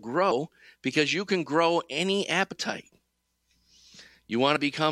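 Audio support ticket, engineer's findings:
Compressed frames skipped at 0.30 s, 2.51–2.53 s and 4.55 s. Short skips, sound jumps ahead about 70, 50 and 50 ms. Decoder dropping whole 23.2 ms frames, roughly three, two, two.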